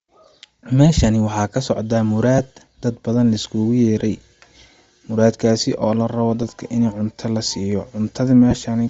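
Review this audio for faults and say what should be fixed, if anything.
Bluetooth LC3 compression runs through the whole speech clip, giving it a breathy, grainy top where the encoder has dropped upper-spectrum detail and filled it with noise. The damage is plainly audible and likely comes from a low-rate LE Audio link, which fits about 32 kbps with 7.5 ms frames. On a spectrogram the highs look patchy and speckled instead of showing clean harmonics. Raising the link bitrate or recording over a wired connection would prevent this.

Lost LE Audio frames cause brief noisy smears at 2.38 s (7.5 ms), 3.98–4.01 s (22.5 ms), 6.43 s (7.5 ms) and 8.51–8.53 s (15 ms). In each gap the decoder repeated the last spectrum with random phase signs. The longest gap points to three missing frames. These appear as short blurred, harmonic-free columns on a spectrogram. A stronger radio link with fewer dropouts would stop these gaps.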